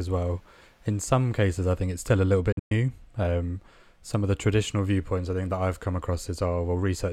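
Right after "it's still a little", from 2.52 to 2.72 s, the speech cuts out in pieces: 162.5 ms of silence spread across about 186 ms, the longest gap 116 ms. That's likely a Bluetooth dropout. Late packets got discarded, and the speech resumes as if it had kept playing.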